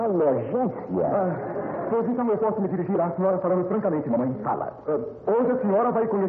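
From 2.07 s to the end of the clip, the audio carries a time-stretched section, running at about 1.35 times its earlier pace, so it turns rushed. Pitch does not rise with the speed, which separates this from a simple playback-rate or resampling error where everything would shift upward. The likely cause is stretching software compressing that stretch to fit a length by dropping short slices.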